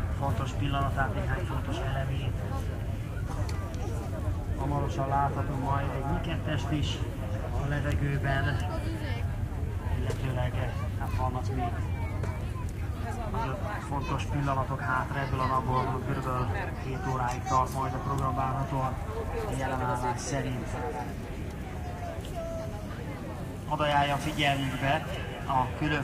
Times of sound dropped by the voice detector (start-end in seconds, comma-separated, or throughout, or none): none